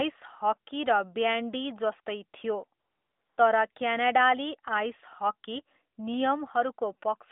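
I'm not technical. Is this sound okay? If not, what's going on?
No. This is a phone recording with AMR comfort noise. Right after "र ब्यान्डी जस्तै थियो", from 2.80 to 3.38 s, the phone decided nobody was talking and stopped sending sound. The receiver filled the gap with smooth, fake hiss. It happens again briefly from 3.72 to 3.76 s.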